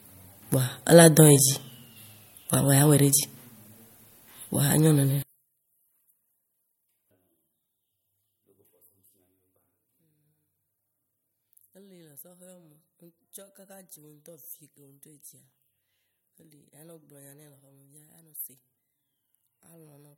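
From 5.22 s to the end, the speech drops by about 30 dB in mono. Only a faint residue remains. The likely cause is one channel inverted. With reversed polarity on one side, the centred voice cancels when both channels are summed.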